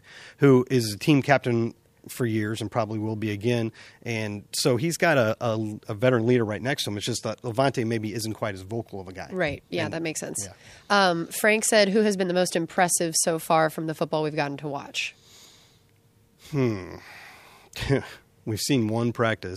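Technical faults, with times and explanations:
No technical faults detected.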